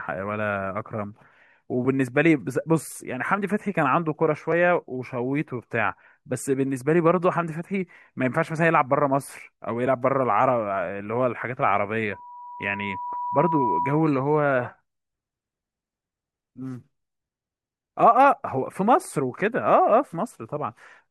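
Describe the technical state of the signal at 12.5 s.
At 12.5 s a steady tone near 978 Hz is swelling over the speech, taking roughly a second and a half to reach about the same level. This is loudspeaker feedback squeal, running from 12.12 to 14.30 s: the microphone picks up its own loudspeaker, and loop gain above one lets that frequency grow.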